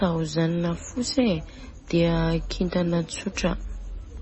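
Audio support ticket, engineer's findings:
MP3 compression, whole clip. Nothing above 8 kHz. Speech watery and swirly, s sounds with metallic chirps. Likely a low-bitrate MP3 encode, fitting about 24 kbps. Starved encoder cut the treble and switched weak frequency lines on and off between frames.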